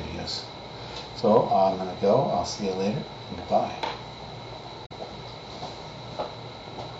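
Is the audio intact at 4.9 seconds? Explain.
No. Between 4.85 and 4.92 s there is damaged data in the compressed stream: corrupted bytes make the decoder misread those frames, lose sync and hunt for the next valid frame header. For about 70 ms this comes out as a brief chirp, squawk, click or short hole.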